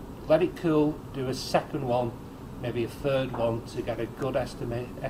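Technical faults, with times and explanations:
No technical faults are heard in this clip.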